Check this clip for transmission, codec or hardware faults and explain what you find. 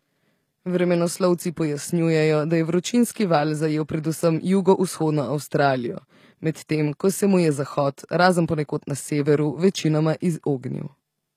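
The clip carries one codec fault, present for its whole length: artefacts consistent with HE-AAC compression. The likely cause is encoding at a low bitrate, with the damage pointing to something around 24 kbps. The codec codes only the lower spectrum and synthesises the treble by copying lower bands upward under a coarse envelope. The top end of the speech stays bright but is not the original, and s sounds come out gritty and metallic. Nothing is present above 14.9 kHz.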